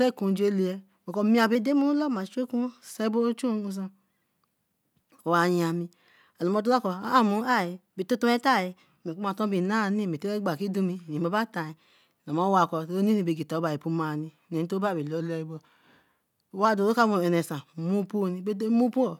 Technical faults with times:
1.55-2.90 drift correction step
7.41-9.23 drift correction step
11.69-12.27 drift correction step
15.20-16.65 drift correction step

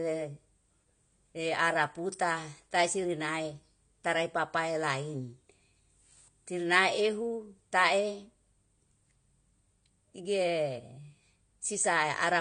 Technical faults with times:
0.00-12.40 AAC compression

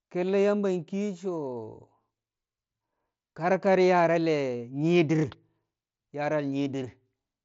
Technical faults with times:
none

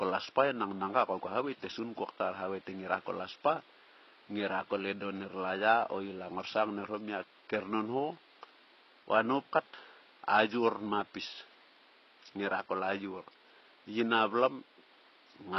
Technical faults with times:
0.00-15.58 HE-AAC compression

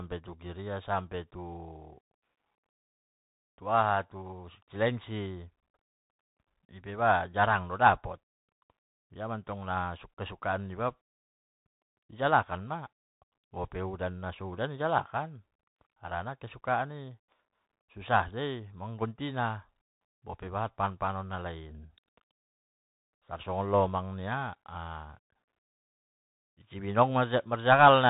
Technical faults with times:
0.00-28.10 Bluetooth CVSD headset codec

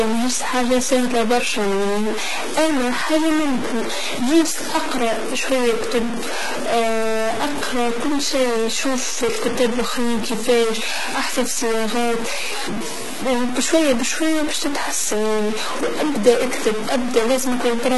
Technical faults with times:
0.00-17.97 stuck bit
0.00-17.97 HE-AAC compression

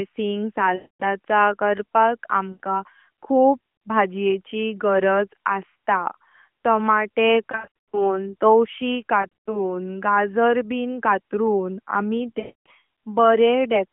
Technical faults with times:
0.76-1.03 lost AMR speech frames
2.53-2.60 lost AMR speech frames
7.52-8.20 lost AMR speech frames
9.22-9.59 lost AMR speech frames
12.40-12.66 lost AMR speech frames

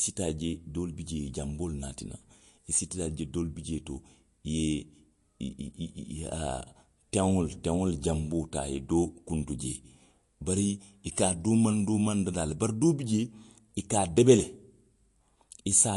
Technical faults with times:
0.00-15.96 MP3 compression

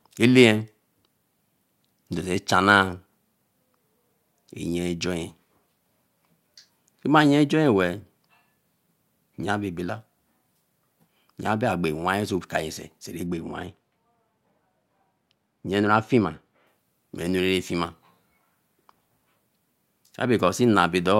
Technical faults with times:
13.26-16.67 de-emphasis applied wrongly

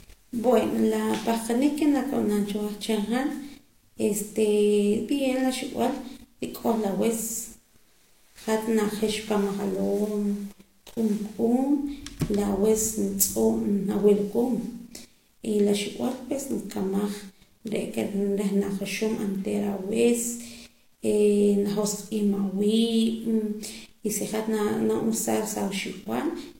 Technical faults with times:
0.00-26.59 transcoding between lossy codecs

